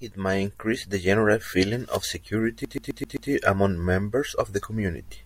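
A CD stuck on one turn runs from 2.65 to 3.30 s, just before "among members of the". A scratch keeps throwing the laser back one track, so the same 130 ms slice of speech repeats five times, each jump marked by a brief mute, giving a fast, even stutter.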